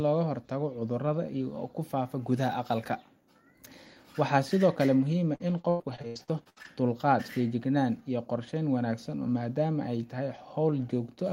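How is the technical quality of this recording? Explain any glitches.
The recording has one clear glitch, repeated packet loss (robotic sound), between 5.35 and 6.66 s. Over that stretch, audio packets kept arriving late or not at all. The receiver covered each hole by extending the last sound it had, only for the next hole to follow moments later. Around a dozen gaps, the longest 102 ms, mean about a third of the span is concealed. The speech turns choppy, with pieces missing.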